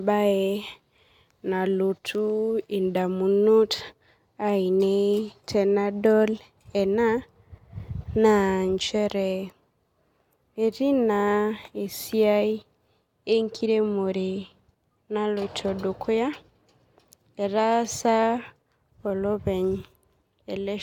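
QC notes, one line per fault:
Nothing to flag on this speech recording: I listened all the way and didn't hear a single fault worth a line.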